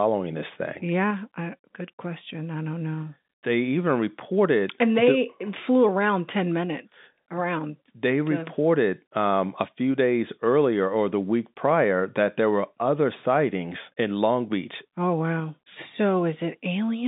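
No technical faults can be heard in this speech.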